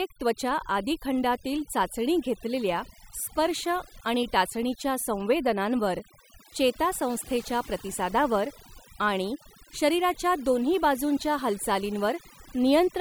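Across the whole speech clip there is overdone noise removal: a denoiser set far too aggressively keeps switching off frequency bands that sit near its noise estimate, taking quiet speech detail with them. The background becomes near-silent with twinkling specks. A spectrogram would show scattered isolated dots between words and holes punched through the speech's harmonics.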